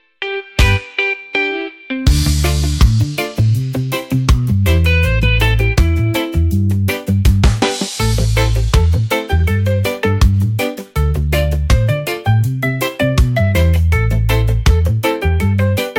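No technical faults are audible.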